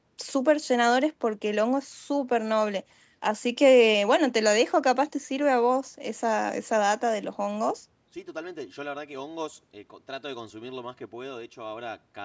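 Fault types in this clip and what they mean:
There are no fault types in this clip, so there is nothing for them to mean.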